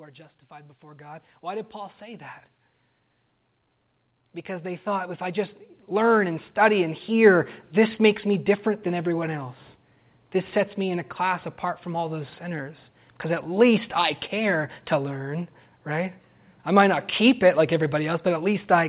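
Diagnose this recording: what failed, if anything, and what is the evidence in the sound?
Automatic gain rising, in the call processing stage, is the fault here. From 0.05 to 2.3 s the level climbs about 8 dB, and from 4.61 to 9.15 s about 11 dB, each a slow swell rather than a step. The background noise rises along with the speech, which rules out a talker moving closer to the microphone. The gain control judged the input too quiet and ramped its gain up, over this narrowband call path that stops at 4 kHz, consistent with G.711.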